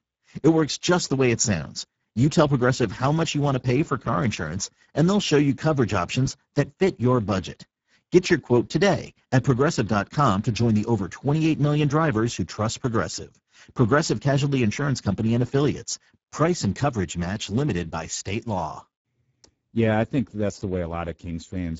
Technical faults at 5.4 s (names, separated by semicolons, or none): Speex codec